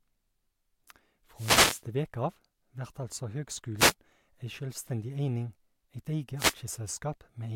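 Speech with three wireless microphone noise hits: 1.35–1.83 s, 3.77–3.94 s just after "av vert altså", and 6.37–6.55 s. Each is a swish of static as the FM signal fades, appearing as broadband noisy vertical bands on a spectrogram and fuzzy bursts on the waveform.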